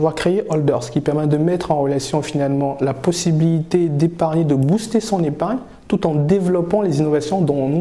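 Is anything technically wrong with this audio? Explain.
No, nothing technically wrong turns up anywhere in this audio.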